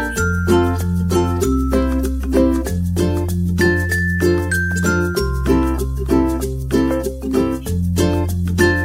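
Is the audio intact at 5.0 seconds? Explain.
No. The word clock ticks run from 0.75 to 8.30 s, so 5.0 s falls within them. The receiving device's clock drifts against the sender's by roughly 20 ppm, and a single sample is dropped or repeated about once per second, producing sharp, regularly spaced ticks.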